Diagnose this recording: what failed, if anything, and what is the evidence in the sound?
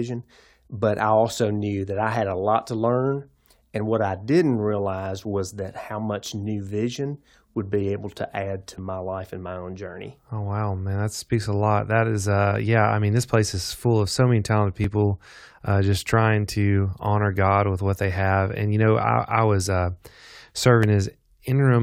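The capture path likely suffered dropped buffers (overruns) at the driver or buffer stage: the software fell behind, and the hardware overwrote blocks of samples before they were read. The speech then jumps straight across each gap with no silence, leaving a short skip at 8.78 s and 14.84 s, where only a few milliseconds vanish, and a longer jump at 20.83 s, where roughly 20 ms of sound is lost.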